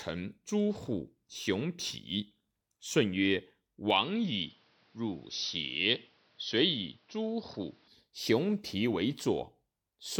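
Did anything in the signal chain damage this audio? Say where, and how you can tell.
Yes. Input switched to a poorer device, 3.90 to 7.88 s: the speech abruptly loses everything above 6 kHz and gains faint new background noise, likely a capture-device change at the driver stage.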